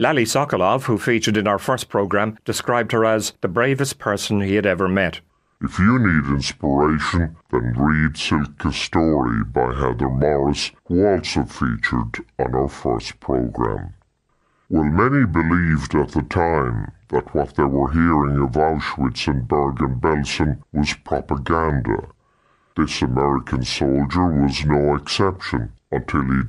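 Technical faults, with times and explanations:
5.30 to 26.48 s: section at the wrong speed. From here to the end the speech plays at 0.675 times its recorded rate, likely from playback against the wrong clock, so it drags and drops roughly seven semitones. A spectrogram shows harmonics and formants shifted downward, and the waveform's syllables stretched.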